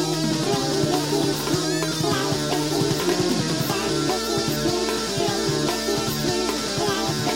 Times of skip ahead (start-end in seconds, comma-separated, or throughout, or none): none